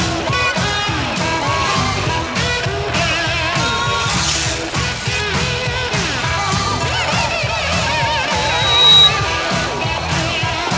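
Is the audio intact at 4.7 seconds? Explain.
No. The sender's voice detector likely judged the sound as background and stopped sending, so sound dropped by the voice detector leaves 4.70 to 4.73 s as a 30 ms patch of comfort noise.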